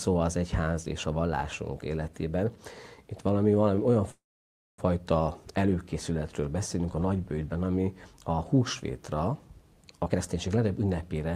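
Call audio freeze, 4.11 to 4.80 s: the audio stops and the last sound trails into about 0.59 s of silence, likely because delayed packets emptied the jitter buffer. It then resumes where it stopped.

Jitter buffer speed-up, 10.03 to 11.31 s: the receiver drains excess buffered delay by cutting short pitch-period pieces, so the audio plays about 22% faster at unchanged pitch, shedding roughly 0.3 s.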